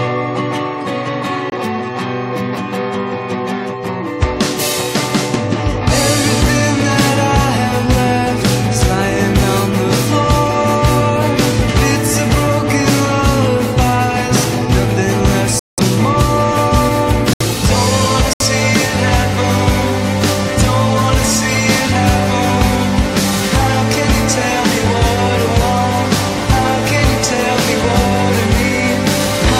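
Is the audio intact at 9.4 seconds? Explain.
Yes, at 9.4 seconds the audio is intact, with no dropout, click, distortion or other fault at that point.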